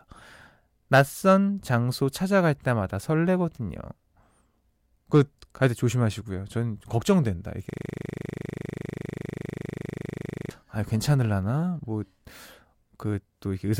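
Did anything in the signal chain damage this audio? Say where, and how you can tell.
Yes. A system hang loop at the driver or buffer stage, 7.70 to 10.51 s. One 40 ms slice of speech repeats exactly, buzzing steadily at 25 Hz.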